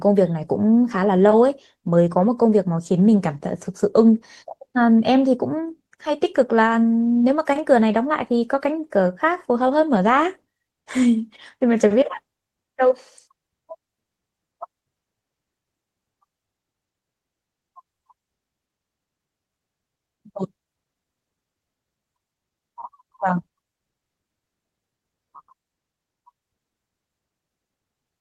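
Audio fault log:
No faults detected.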